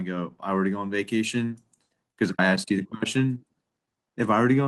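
No technical faults can be heard anywhere in this speech recording. No dropouts, clicks, distortion or other glitches interrupt it at any point.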